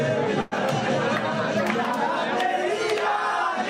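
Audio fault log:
0.41–0.54 s, call audio freeze: the sound stalls into a fading buzz for about 100 ms, then picks up where it left off, likely packets held up in transit.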